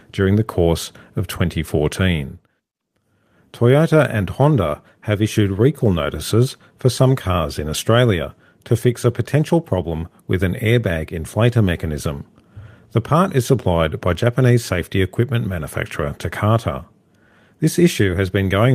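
No technical fault can be heard anywhere in the speech, and the signal holds steady for its whole duration.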